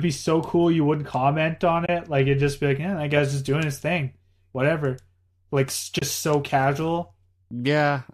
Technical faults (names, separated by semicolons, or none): de-emphasis applied wrongly; AAC frame loss with muting